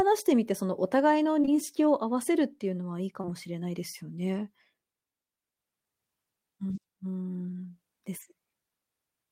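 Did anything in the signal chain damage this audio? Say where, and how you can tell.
Yes, on the network path. Short concealed packet loss at 1.41–1.49 s and 3.21–3.30 s, each two lost 20 ms packets. The decoder extrapolated, leaving brief smears.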